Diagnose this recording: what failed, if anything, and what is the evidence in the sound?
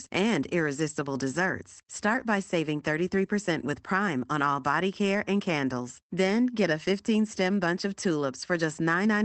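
Nothing stood out on listening: the speech carries the narrowed top end, around 8 kHz, that you'd expect from a call link, and no failure at any stage could be heard.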